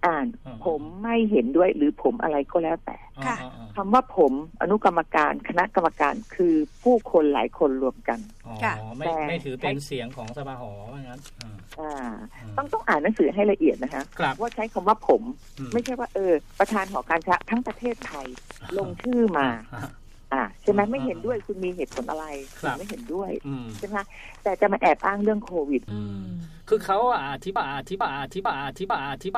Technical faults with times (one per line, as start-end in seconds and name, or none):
17.17-19.35 train of clicks
27.56-29.37 broken-record loop